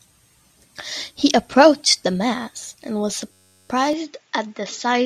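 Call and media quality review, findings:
System hang loop, 3.32 to 3.69 s: steady buzz at 93.8 Hz, one 10.67 ms slice repeated 35 times, which fits a 512-sample ring buffer replaying during a driver or host freeze. Waveform shows identical repeating cycles; spectrogram shows harmonic stripes.

Input switched to a poorer device, 3.93 s to end: sound turns dull, nothing above 7.3 kHz, level roughly unchanged, no gap at the switch, likely an input-device or headset-profile change. Spectrogram shows a hard ceiling at 7.3 kHz and a faint new noise floor.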